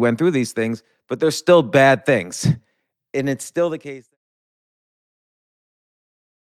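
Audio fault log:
No fault is present in this speech clip. A smooth fade out brings the level down gradually from roughly 3 s to 4.17 s, with no click or hard edge where it ends.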